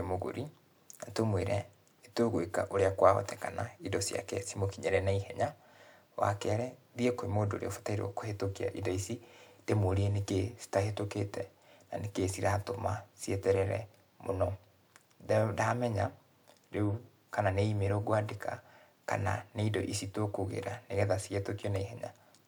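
No technical faults can be heard anywhere in the recording.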